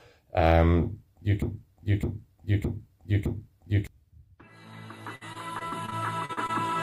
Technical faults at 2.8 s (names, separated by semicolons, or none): broken-record loop